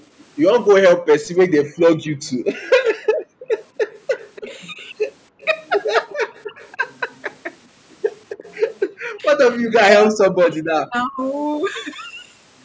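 From 0.93 to 2.38 s the voice sinks and breaks into pieces. This is speech suppressed in double talk. Both sides were likely talking at once. The echo canceller then turned the near talker down along with the echo. The deepest dips reach roughly 40 dB, about a second in total.

From 2.66 to 3.85 s the background is gated by the echo canceller. The loudspeaker was playing, so the canceller pulled the microphone down by about 40 dB. The room sound drops away for roughly 0.7 s in all. It comes back when the canceller releases.

From 3.57 to 6.71 s there is an echo leak. A faint, delayed copy of the voice trails it by 342 ms, around 25 dB below the speech. The loudspeaker end's canceller likely left part of its microphone pickup in place and sent it back.

Inside that stretch the suppression returns twice. From 4.37 to 4.8 s it is brief and shallower, roughly 25 dB. From 6.06 to 6.85 s it cuts deeper again, near 40 dB.

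From 8.37 to 8.52 s a short scrap of the same 342 ms echo slips through.

From 9.12 to 11.21 s the voice is suppressed in double talk once more. It drops by roughly 40 dB in pieces, for about 1.5 s altogether.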